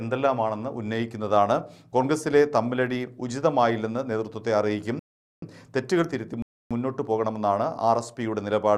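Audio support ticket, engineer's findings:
Player buffer underrun, two rebuffering stalls. Playback outran the download; output halted until data arrived, then continued from the same sample. Symptom: hard drop to silence at 4.99–5.42 s (about 430 ms added) and again at 6.42–6.71 s (about 280 ms added). No content skipped, no repeat on resume. Timeline stretched by roughly 0.7 s total. Probable component: network fetch or client buffer sizing; second stall one second after the first suggests buffer never refilled.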